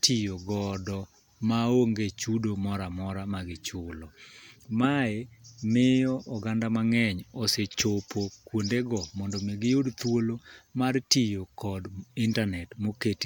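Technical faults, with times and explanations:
No technical faults detected.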